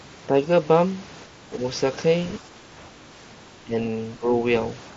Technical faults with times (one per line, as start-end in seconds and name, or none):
1.26-1.63 speech suppressed in double talk
2.39-2.98 speech suppressed in double talk
3.64-3.74 speech suppressed in double talk
4.19-4.32 speech suppressed in double talk